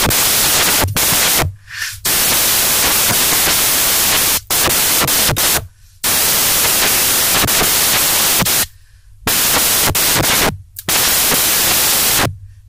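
From start to end, samples built from the wrong bytes: misassembled bytes push the fast-changing low bits into each value's high part, producing loud, harsh broadband noise throughout.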